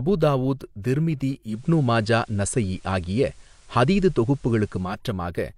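Digital radio blending to analogue occurs from 1.43 s to 5.01 s of this speech: the receiver lost the digital stream and cross-faded over about 227 ms to the FM broadcast. Level shifts by about 3 dB, and faint hiss rises well below the signal.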